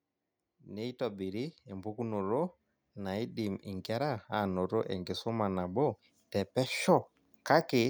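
A speech recording whose level slowly swells from 0.44 s to 4.59 s, voice and background noise climbing together by about 8 dB. That is automatic gain rising: the gain control judged the input too quiet and raised its gain gradually across those four seconds.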